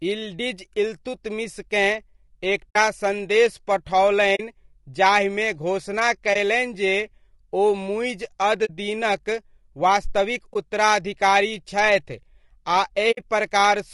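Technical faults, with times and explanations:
Throughout, low-delay AAC compression: The speech sounds rough and grainy. Noise fills the gaps between the pitch harmonics, and the top band sounds thin and artificial. The damage is plainly audible. This is likely AAC-ELD, the low-delay AAC used in video calls. Its short frames resolve the harmonics poorly and spend extra bits. At a bitrate that fits roughly 32 kbps, too little is left for fine detail.
2.69, 4.35, 6.33, 8.65, 10.53 and 13.11 s, AAC frame loss with muting: Short soft holes open in the speech, lasting about 20 to 60 ms each. The one at 8.65 s falls after "ओ मुइज़ अद" and before "दीनक वास्तविक". The one at 10.53 s follows "मुइज़ अद दीनक वास्तविक". Each hole is one to three lost frames, which fits frames of about 20 ms. The decoder zeroed their spectrum. The overlapping windows fade the sound out and back in.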